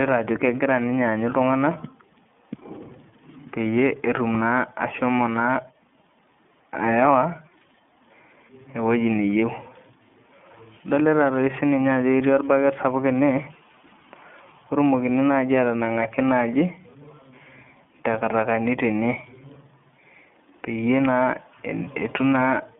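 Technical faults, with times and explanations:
Throughout: iLBC codec. The sound is squeezed into a telephone-style band of about 150 Hz to 3.5 kHz, with nothing at all above 3.8 kHz, so it is dull and boxy. Each frame's excitation is coded on its own, leaving a plainly audible rough, synthetic grain, which fits the 13.33 kbps mode with 30 ms frames. On a spectrogram the energy stops at a hard ceiling near 3.8 kHz.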